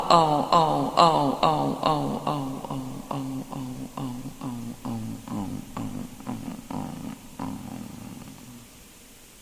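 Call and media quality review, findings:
No technical faults detected in the signal; level, continuity and bandwidth show nothing that points to a failing component in the capture, transport or playback path.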